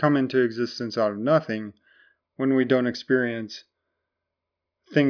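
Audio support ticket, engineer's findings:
No fault found in the speech recording. Nothing to escalate on the audio side.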